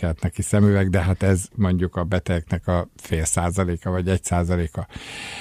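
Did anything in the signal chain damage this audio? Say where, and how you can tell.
No, nothing along the chain from capture to playback has left an audible mark on this speech recording.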